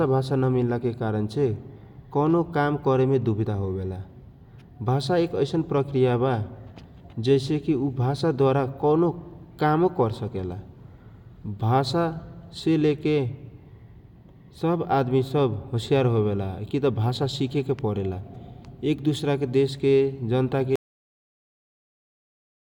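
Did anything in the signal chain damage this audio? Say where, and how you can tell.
Yes. The speech has a cut-off end, and the damage sits at the storage or playback stage. At 20.76 s the sound stops mid-syllable. There is no natural decay and no room tail. The level falls straight to digital silence, which holds for the last 1.9 s of the file. That abrupt drop fits final buffers that were never written to the file or never sent to the output. The recording ends before the speech does.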